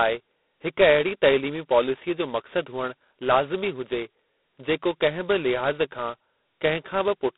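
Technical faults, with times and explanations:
Throughout, G.726 ADPCM: the speech is confined to a telephone band of roughly 200 Hz to 3.7 kHz and carries a harsh, rasping hiss that rises and falls with the speech level, which fits the 16 kbit/s mode. Each sample keeps only two bits of difference from an adaptive prediction, so quantisation error is heavy and tracks the signal. A spectrogram shows an empty region above about 3.9 kHz and grainy noise filling the band under speech. The waveform looks fuzzy rather than clean.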